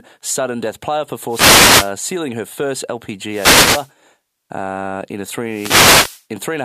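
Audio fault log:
1.28–1.93 s, 3.29–3.91 s, 5.47–6.24 s: wireless microphone noise hit. Three bursts of static, each roughly 0.6–0.8 s long, occur as the analogue FM radio link fades through multipath cancellation and the receiver's noise floor rises over the audio.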